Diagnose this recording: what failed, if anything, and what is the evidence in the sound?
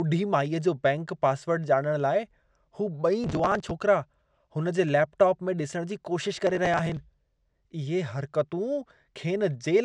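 Processor overload crackle at the driver or buffer stage, 3.24–3.71 s and 6.39–6.97 s. Skipped buffers of about 5 ms leave hard-edged gaps, heard as tearing.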